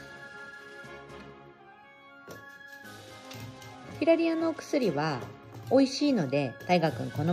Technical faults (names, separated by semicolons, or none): none